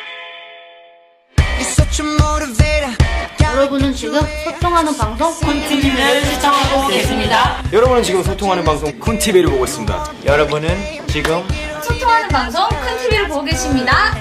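No technical faults can be heard anywhere in this clip.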